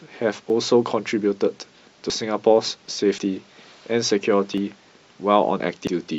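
Dropped buffers (overrun) at 0.5, 2.1, 2.86, 4.58 and 5.6 s each sound like the speech jumping ahead. Roughly 20 ms is missing each time, about 40 ms at 2.1 s, likely because samples were overwritten before being read. Damaged data in a compressed stream at 3.18 and 5.87 s produces brief blips as the decoder misreads corrupted frames and resynchronises.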